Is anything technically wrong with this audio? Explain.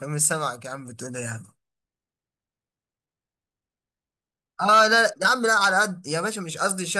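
Yes. From 0.13 s to 6.95 s, clock slip clicks tick through the speech about ten times a second. Likely unsynced clocks, about 200 ppm apart, dropping or repeating single samples.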